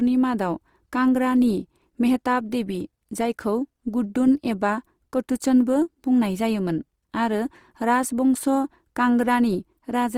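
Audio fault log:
throughout, Opus compression: the speech sounds rough and grainy, with noisy texture where fine detail should be, yet the full bandwidth stays open and there is little of MP3's swirling; the likely cause is Opus music-mode coding near 24 kbps, refilling bit-starved bands with folded or noise energy.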